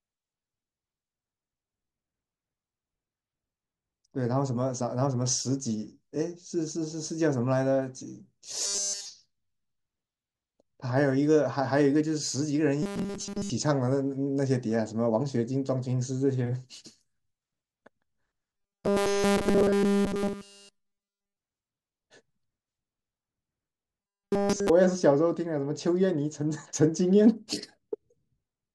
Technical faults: robotic sound from repeated short buffers

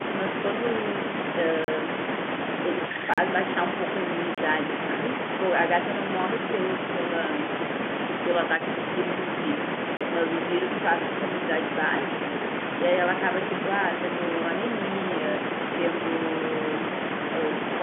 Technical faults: block of digital silence; packet loss with last packet repeated

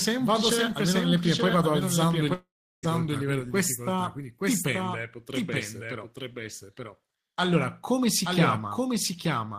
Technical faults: doubled audio track; long network dropout

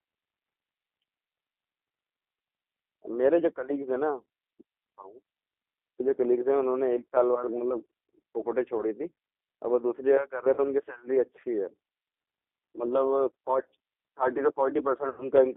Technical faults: G.729 codec; VoIP packet loss concealed by the speech codec

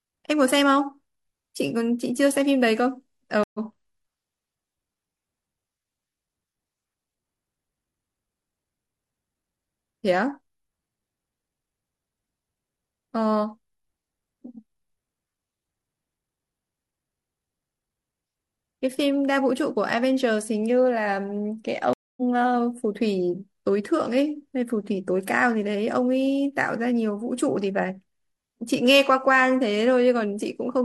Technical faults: stream reconnect

